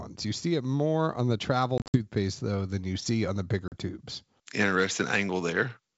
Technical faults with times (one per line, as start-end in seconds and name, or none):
1.78-1.96 packet loss on an ADPCM call
3.68-3.77 packet loss on an ADPCM call